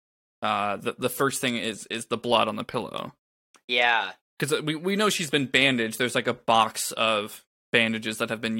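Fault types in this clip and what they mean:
No audible technical faults turn up anywhere in this speech recording.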